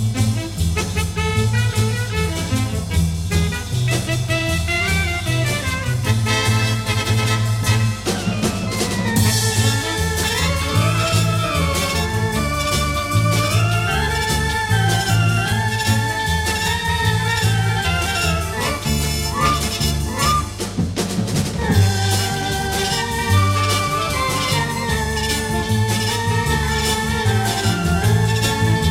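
A steady mains hum at 50 Hz runs through the whole recording. It sits only a little below the audio, loud and constant, likely from a ground loop or nearby transformer.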